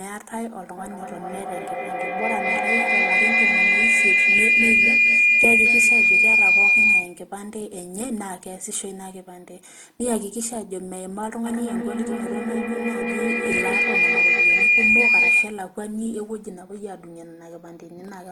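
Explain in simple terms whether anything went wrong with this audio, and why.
Feedback howl spoils this speech twice, from 0.77 to 7.31 seconds and again from 11.46 to 15.73 seconds. Two devices on the same call seem to be sharing a room. Each microphone picks up the other's loudspeaker, so the sound loops round and gets louder every trip. It narrows to a shrill tone near 2 kHz. That tone pulses about five times a second and climbs well above the talking.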